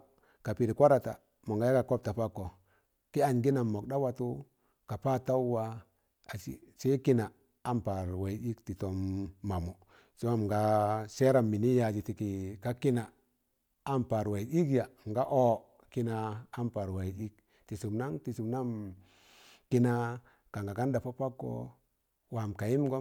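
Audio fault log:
No fault can be heard anywhere in this speech clip. There is nothing to log against any point in the recording.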